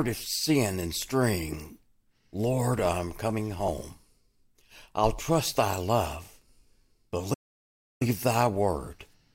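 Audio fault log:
7.33–8.02 s playback stall: speech halts into clean silence for 0.67 s, far longer than a brief dropout, likely from the player starving of data.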